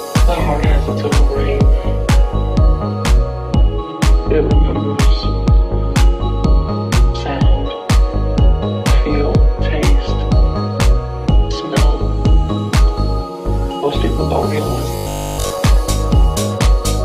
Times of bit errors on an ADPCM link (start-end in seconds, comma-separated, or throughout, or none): none